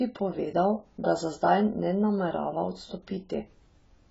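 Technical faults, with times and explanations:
Throughout, AAC compression: the speech sounds dull and muffled, with nothing above 7.6 kHz, and the heavy damage smears the remaining detail into a watery, warbling texture. The likely cause is AAC-LC starved of bits, consistent with a rate of about 16 kbps. To stay within budget it drops the top of the spectrum entirely and quantises what is left so coarsely that fine detail breaks up from frame to frame.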